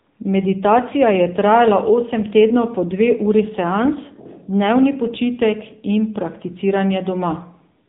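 AMR narrowband mobile codec damage runs throughout: the speech was squeezed through a low-rate vocal-tract model, which fits about 8 kbps, leaving nothing above 3.8 kHz and a plainly buzzy, synthetic tone.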